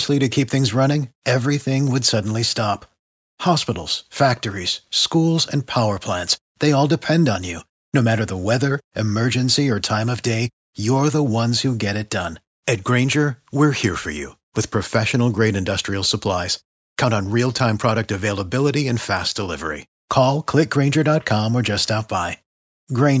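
No technical faults are audible.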